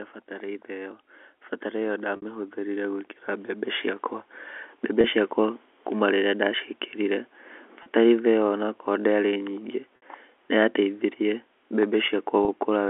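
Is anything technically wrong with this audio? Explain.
Yes, two faults are audible in this speech.

From 1.71 to 4.14 s, automatic gain rising: the gain control judged the input too quiet and lifted its gain by about 9 dB over that stretch, so the speech and the background swell upward together rather than jumping.

Packet loss with pitch repetition occurs at 2.16, 5.01, 7.83, 9.96 and 12.45 s. The receiver filled each gap by repeating the last pitch period. The 30 ms gaps sound like a brief buzzy hold, and the 60 ms gaps at 2.16 and 9.96 s, which fit two lost packets, fade toward silence before the speech cross-fades back in, all within the narrow G.711 telephone band.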